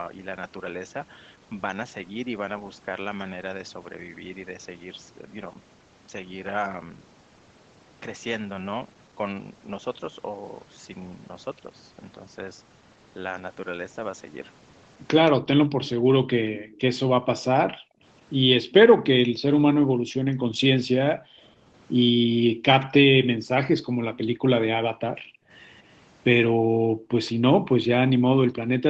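A speech recording from a call where the far side keeps talking over this one. From 15.32 to 25.51 s, and again from 26.48 s to the end, the voice dips hard, by as much as about 40 dB, for roughly seven seconds of that first stretch. That's speech suppressed in double talk. Most likely the echo canceller couldn't tell the near talker from the loudspeaker echo and ducked everything. There's also echo leak: a faint delayed copy of the voice, trailing by 171 ms at about 25 to 35 dB below the speech, turns up at 15.87–16.77, 22.80–22.86, 24.14–24.18, 25.74–25.94 and 27.26–27.30 s. That's likely residue the far end's canceller missed on its loudspeaker pickup and sent back. The audio has gone through Opus at 20 kbps, which caps the top end at 8 kHz.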